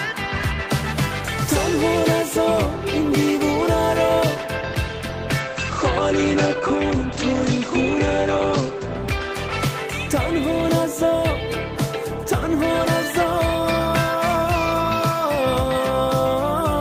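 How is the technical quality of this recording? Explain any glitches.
The recording has one glitch, a call bitrate drop from 5.43 s to 10.05 s. The encoder's rate falls from 32 kbps to 13 kbps and stays at its lowest for about 3.3 s. With fewer bits, the codec quantises more coarsely. It also narrows the band, cutting the top from 20 kHz to 8 kHz. The sound turns muffled and rough or watery. Brightness returns once the bitrate recovers after 10.05 s.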